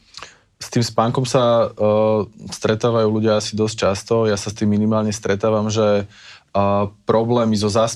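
Nothing in this recording stands out as a technical fault; the speech runs along without any glitch, dropout or disturbance worth pointing to.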